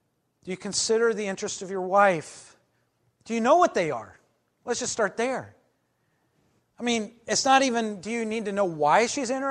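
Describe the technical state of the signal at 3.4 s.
At 3.4 s the speech signal is intact, with no audible dropout, distortion, clipping or other fault at that moment.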